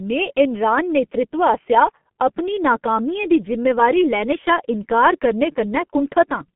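From start to finish the speech passes through a G.723.1 codec, the early low-bitrate telephony coder. Its narrow line band of roughly 150 Hz to 3.4 kHz, with nothing above 3.8 kHz, and the heavy coding damage fit the 6.3 kbit/s mode. Working in coarse 30 ms frames with a slowly updated voice model, it leaves the speech muffled and hoarse, with smeared, indistinct consonants and a thin, boxy tone lacking low warmth.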